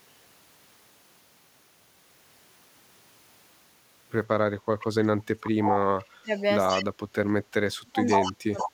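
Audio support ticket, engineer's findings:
Echo leak: likely a far-end echo canceller passing residual loudspeaker pickup; a 130 ms delayed copy of the speech at 4.8, 6.36, 6.7, 8.07 and 8.58 s, faint early, only about 5 dB down near the end.

Speech suppressed in double talk: likely canceller misjudging simultaneous talk as echo; speech dips by up to about 35 dB, 5.01–6.31 s, 6.75–7.51 s and 7.73 s to the end.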